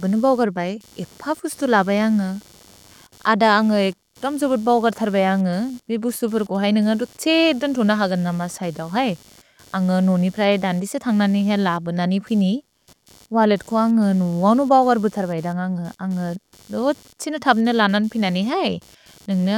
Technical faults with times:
0.00-19.58 computer activity noise

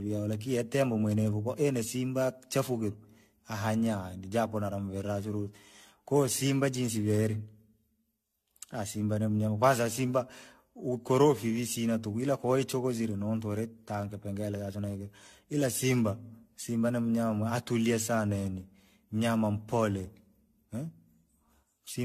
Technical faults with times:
0.00-22.04 generation loss

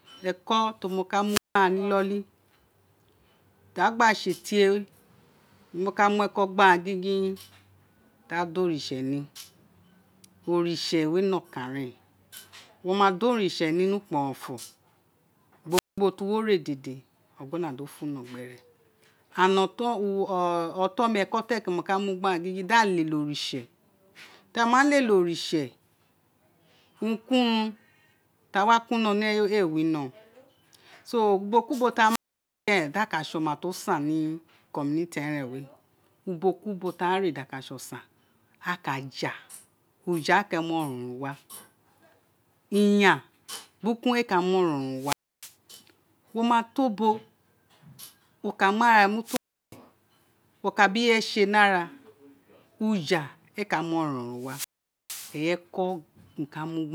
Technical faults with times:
1.26-1.59 wireless microphone squelch dropout
15.70-15.99 wireless microphone squelch dropout
32.06-32.71 wireless microphone squelch dropout
44.95-45.54 wireless microphone squelch dropout
49.24-49.76 wireless microphone squelch dropout
54.36-55.39 wireless microphone squelch dropout

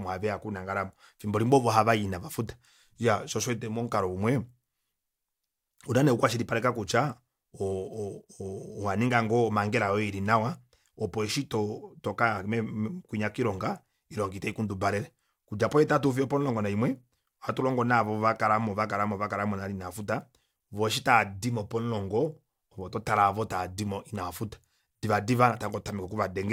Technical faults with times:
none

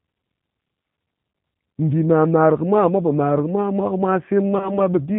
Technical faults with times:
0.00-5.18 G.729 codec
4.58-4.79 VoIP packet loss concealed by the speech codec

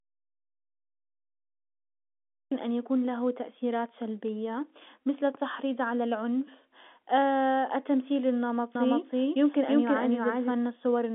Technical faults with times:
0.00-2.52 audio dropout to silence
8.75-10.51 doubled audio track

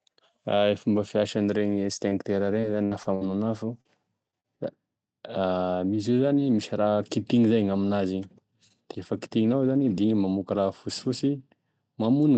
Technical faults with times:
2.09-3.23 repeated packet loss (robotic sound)
3.81-3.87 short concealed packet loss
4.31-4.47 short concealed packet loss

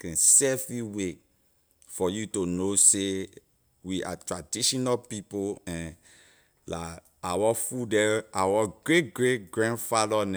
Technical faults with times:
none

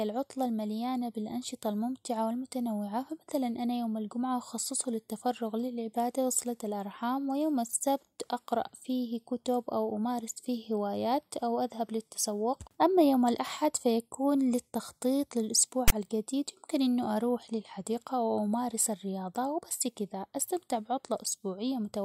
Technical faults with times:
15.88-15.92 file tags played as audio

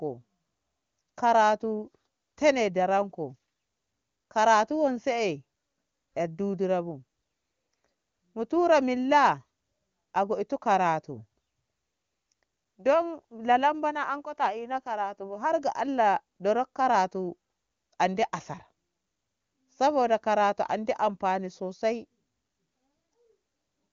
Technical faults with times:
none

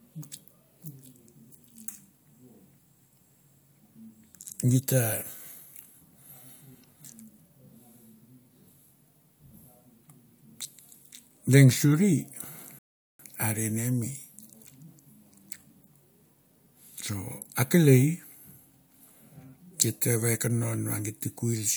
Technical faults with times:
12.79-13.19 rebuffering stall

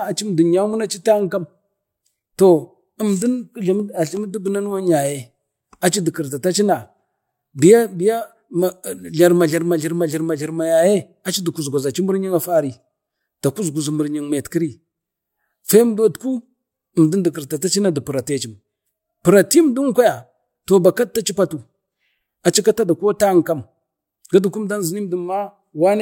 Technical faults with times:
none

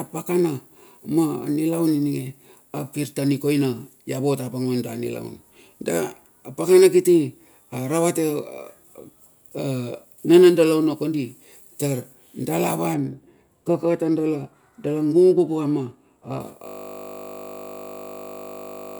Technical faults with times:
12.94-16.40 de-emphasis applied wrongly
16.67-18.99 system hang loop

